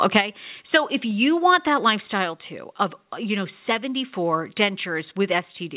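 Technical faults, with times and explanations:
1.11 s, microphone volume stepped down: the speech level drops by about 2 dB in one step and stays lower, likely from the call software cutting input gain. The waveform envelope shrinks abruptly, and the spectrogram, empty above 4 kHz through the call codec, dims evenly.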